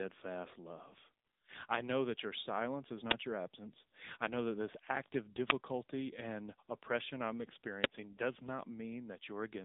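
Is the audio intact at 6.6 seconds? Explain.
No, at 6.6 seconds the speech still carries the AMR narrowband mobile codec damage that runs through the whole clip. Nothing above 3.8 kHz survives, so it's boxed into a phone band, and the plainly buzzy, synthetic texture suggests a low bitrate near 8 kbps.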